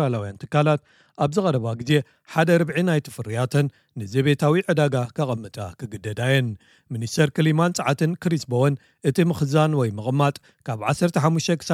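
From 1.89 s to the end, pre-emphasis left on: treble lifted about 8 dB at 10 kHz by the CD 50/15 µs curve without de-emphasis, giving a fixed shelf rather than a narrow resonant peak. Thin, bright, sibilant.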